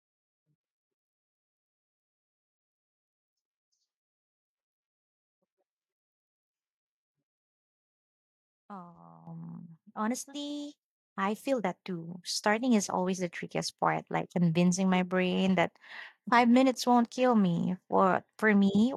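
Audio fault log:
9.27 s, microphone volume stepped up: the speech suddenly gets louder by about 10 dB, and the background noise under it jumps by the same amount at the same instant, so the whole sound shifts up in one step rather than swelling gradually. Because voice and room rise together, the change happened at the input rather than in the talker. The call software judged the microphone too quiet and raised the device's input volume in a single jump.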